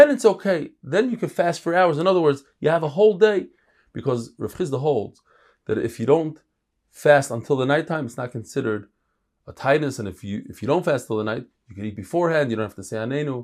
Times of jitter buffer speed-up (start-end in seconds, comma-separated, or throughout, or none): none